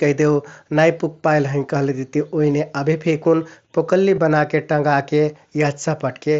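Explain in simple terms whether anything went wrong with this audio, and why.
Two brief dropouts from concealed Bluetooth headset packet loss occur, at 2.54 s just before "अभे फेकुन पुकल्लि बनाके" and at 4.16 s just after "अभे फेकुन पुकल्लि". About 7.5 ms and 15 ms of audio went missing between headset and phone, and the receiver patched each gap by repeating a matching piece of the preceding sound. The first, a single lost packet, is nearly hidden. The wideband headset link carries the speech up to 8 kHz, with slight graininess on louder sounds.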